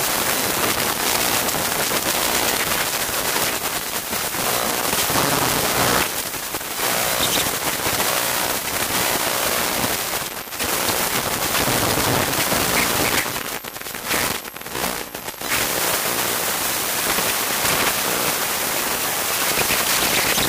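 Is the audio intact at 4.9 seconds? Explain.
Yes, the audio is intact at 4.9 seconds, with no fault heard at that moment.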